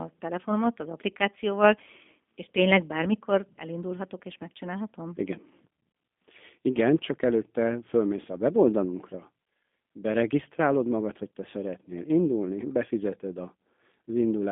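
Speech runs through a G.729 codec for the whole clip, with the roughness and synthetic buzz of an 8 kbit/s CELP voice codec. A spectrogram shows a telephone band of 200 Hz to 3.5 kHz, with nothing above 4 kHz, and smeared, grainy harmonics from coarse pulse-based excitation.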